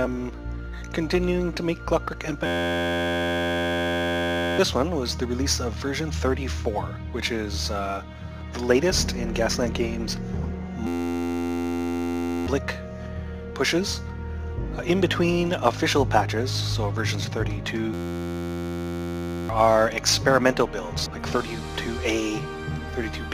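A flat, steady buzz replaces the sound three times: from 2.46 to 4.59 s, from 10.87 to 12.47 s, and from 17.94 to 19.49 s. Each is a system hang loop. The computer or driver stalled while the sound hardware kept replaying the same 11.61 ms stretch of its ring buffer, which fits a 512-sample buffer. Repeating that fragment at 86.1 Hz fuses it into a tone rather than a stutter. When playback resumes, the audio that should have played during the stall is gone, about two seconds at the first hang and about one and a half seconds at each of the other two.

At 21.06 s there is a brief glitch. This is damaged data in a compressed stream. Bytes in that part of the file or stream were corrupted or lost, so the decoder misread the frame there and lost sync, then searched for the next valid frame header before normal decoding resumed.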